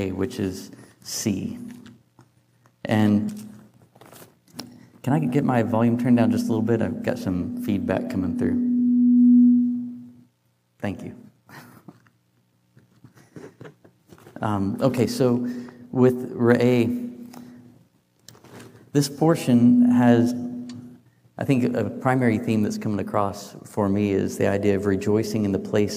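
At 3.28 to 3.30 s there's a brief glitch, and at 20.30 s a shorter glitch. Both are damaged data in a compressed stream. Bytes in the encoded file were lost or overwritten, so the decoder misread those frames, lost sync and had to hunt for the next valid frame header. What you get is a tiny glitch, about 20 ms and 16 ms respectively, breaking through the sound.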